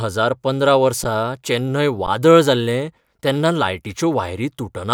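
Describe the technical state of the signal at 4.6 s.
At 4.6 s the speech signal is intact, with no fault to be heard at that moment.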